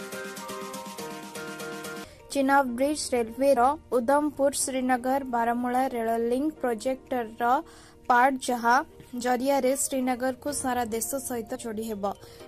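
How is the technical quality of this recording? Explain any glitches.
Two small glitches, both compressed frames skipped. At 3.55 s and again at 11.54 to 11.56 s, the decoder drops a couple and then a few frames, each around 23 ms, so the audio jumps ahead roughly 50 and 70 ms.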